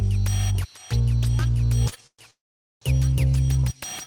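At 1.89 to 1.94 s there is a short stall from a late packet. The receiver's jitter buffer ran dry for an instant, so the last bit of sound was held for about 21 ms and then playback resumed exactly where it left off, with nothing lost. It sounds like a tiny smear or catch. On a spectrogram the partials run flat and unchanging for that sliver, and the waveform shows a brief repeated or drawn-out cycle instead of new detail.

Two call audio freezes follow, likely caused by packets held up in transit. From 2.07 to 2.21 s the sound is stretched for 118 ms, decaying into about 60 ms of silence before resuming. From 2.31 to 2.83 s it happens again at greater length: 509 ms of fill, of which about 450 ms is silent. Each time a buzzy continuation fades out and the audio picks up late rather than skipping ahead, so the timing drifts back by roughly 0.6 s overall. A spectrogram shows horizontal smeared bands tapering into a blank column. 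The waveform shows an envelope dwindling to a flat line, then abruptly restarting.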